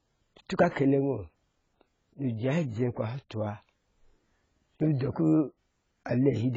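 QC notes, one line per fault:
Throughout, AAC compression: there's nothing above 7.6 kHz, so the speech sounds dull, and sibilants have that fizzy, smeared texture with warble on held sounds. The likely cause is AAC-LC squeezed hard. At this starved rate the encoder drops the top band entirely and spreads its few bits thinly across the rest. The heavy damage fits a bitrate around 16 kbps.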